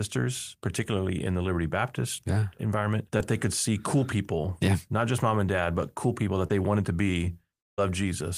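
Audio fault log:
3.17–3.20 s and 6.47–6.51 s, short concealed packet loss: two quick smears, one right after "yeah environment" before "they could see cool", the other after "but cool people that" before "they wanted to be". About 20 ms and 30 ms of audio went missing. The decoder stretched the last bit of sound to cover the gap, for about 18 ms and 24 ms, then blended back into the real audio. That's why you hear a little wobble rather than a clean cut.
7.60–7.79 s, long network dropout: just after "they wanted to be", the sound turns into a synthetic continuation that fades out, and the gap sits at near-silence for about 170 ms before audio picks up again. This is likely a stretch of packets that never arrived. The receiver kept extending the last sound while fading it down, and the missing portion is simply gone when playback resumes.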